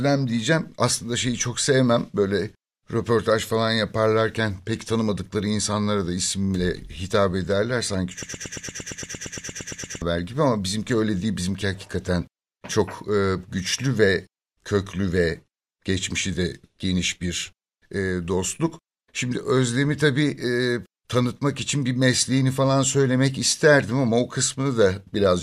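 A broken-record loop runs from 8.23 s to 10.02 s. One 115 ms slice of the speech repeats exactly, back to back, 16 times, giving a rapid mechanical stutter that breaks off just before "gibi ama bizimki öyle". The likely cause is a stall in the player or stream that kept re-sending the last fragment it held, so the speech that belonged in those 1.8 seconds never plays.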